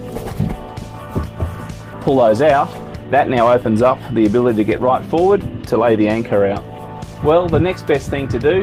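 At 1.93 to 1.95 s there is a skip ahead: about a second of audio was discarded, on the way or by an overflowing jitter buffer, while later audio was already queued. Playback jumps forward with no filled gap, so the material on either side is butted together abruptly.

From 2.09 to 3.74 s a jitter buffer speed-up follows. The receiver, holding more delay than it targets, repeatedly cut out short pitch-period-length pieces, trimming roughly 150 ms in total. The audio plays at about 108 % speed, slightly hurried, with unchanged pitch.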